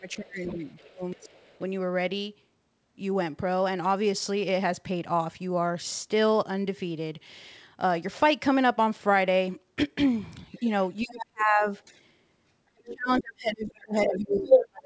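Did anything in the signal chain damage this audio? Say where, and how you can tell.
Yes. Speech suppressed in double talk occurs from 0.0 to 1.19 s, from 11.02 to 11.66 s, and from 12.72 s to the end. The talker's voice dips by about 25 dB, about 40 dB and about 35 dB, in pieces totalling roughly half a second in the first stretch and under a second in the second. The stage is likely the call's echo canceller. With both sides talking, it couldn't tell the talker from loudspeaker echo and attenuated everything.

The other side's voice leaking through is audible from 0.44 to 1.58 s at about 25 dB below the talker, from 10.55 to 11.94 s at about 15 dB below, and from 12.87 to 14.68 s at about 5 dB above the talker. Because these stretches overlap the dips, the second voice is exposed just as the talker is pushed down. This is likely residual far-end audio from the loudspeaker that the same echo canceller failed to subtract from the microphone, within a band that stops at 8 kHz, as G.722 does.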